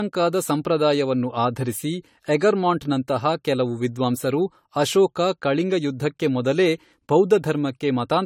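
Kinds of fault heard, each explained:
Generation loss: the speech sounds swirly, smeared and hollow, with blurred consonant onsets and nothing above 18.6 kHz. This is likely from about four successive AAC-LC encodes at what sounds like 64 kbit/s. A single pass would leave far less accumulated smearing.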